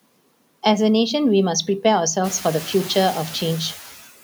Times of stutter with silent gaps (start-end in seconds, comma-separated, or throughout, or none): none